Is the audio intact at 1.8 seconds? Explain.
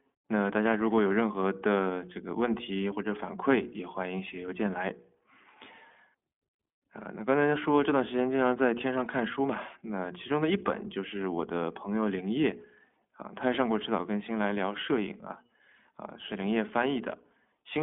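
No. The iLBC codec runs through the whole clip, so at 1.8 s the speech is band-limited to about 200 Hz to 3.4 kHz. It also sounds plainly rough and synthetic, from each frame's excitation being coded independently, which fits 20 ms frames. A bare telephone filter would only muffle the speech without adding that texture.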